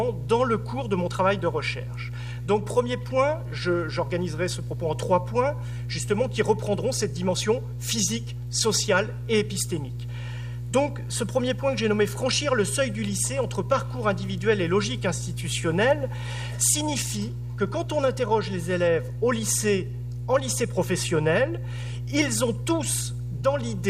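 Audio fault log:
Throughout, mains hum. A steady low tone at 60 Hz sits under the whole clip, with some low harmonics above it. It is strong, only about 5 dB below the sound itself, so it is plainly audible. The power line is leaking into the signal path. A ground loop between connected devices or a transformer close to the cabling would couple it in this way. The tone never changes, because the supply never stops.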